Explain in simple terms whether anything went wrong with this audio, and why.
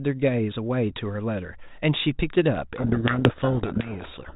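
Codec payload misread from 2.76 s to the end: each G.726 code word's bits are read in the wrong order, burying the speech in harsh distortion.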